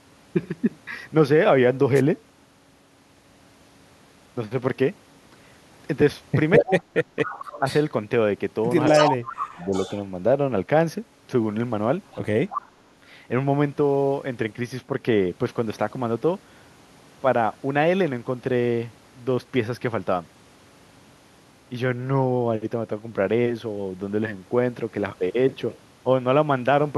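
At 1.94 to 2.02 s a wireless microphone noise hit gives a brief static swish as the radio signal fades and receiver noise rises. Speech suppressed in double talk follows at 6.58 to 7.24 s, with dips of up to roughly 35 dB, likely from an echo canceller ducking the talker while both sides speak. It recurs faintly at 7.59 to 7.65 s and more deeply, around 15 dB, at 9.0 to 9.74 s. Echo leak appears at 7.24 to 7.83 s, 8.86 to 10.01 s and 12.11 to 12.71 s. It is a 228 ms delayed copy of the sound, about 15, 5 and 10 dB below the speech respectively, likely uncancelled loudspeaker pickup sent back.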